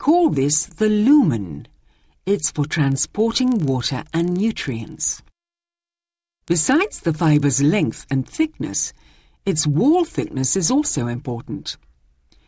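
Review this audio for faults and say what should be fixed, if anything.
Resampler restarted on every block, 2.84 to 7.44 s: each 40 ms block was converted in isolation, so the filter had no real neighbouring samples at block edges and left a small error at each. This produces a 25 Hz ticking buzz riding on the signal, consistent with a 44.1 kHz to 16 kHz conversion. To prevent it, carry the resampler's filter state continuously across blocks rather than resetting it each time.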